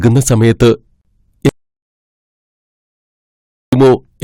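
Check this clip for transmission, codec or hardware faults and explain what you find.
Two faults are present in this speech clip. Hard clipping runs throughout: peaks driven about 8 dB past the limit are cut flat, adding harsh upper harmonics, unlike soft clipping, which rounds peaks smoothly. From 1.49 to 3.73 s there is an audio dropout to silence, likely from a lost input: about 2.23 s of silence with no room tone, unlike a gate, which closes only in pauses rather than cutting speech mid-flow.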